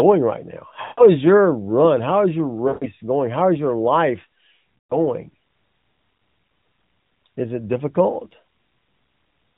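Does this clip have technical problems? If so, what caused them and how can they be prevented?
Yes. Lost AMR speech frames cause three brief gaps: from 0.82 to 1.06 s, after "right now" and before "is your run"; from 2.68 to 2.85 s, after "is your"; and from 4.78 to 4.99 s, after "is your life". Radio errors corrupted frames, so the decoder repeated the last good pitch and vocal tract settings at falling gain. Each gap lasts 120 to 160 ms, which fits runs of several 20 ms frames. The result is a smeared, drawn-out sound fading toward silence, with rough speech on recovery. On a spectrogram the harmonics smear horizontally and fade below the 4 kHz narrowband ceiling. On the waveform, amplitude tapers then rebounds. Stronger channel coding or retransmission on the radio link would prevent these losses.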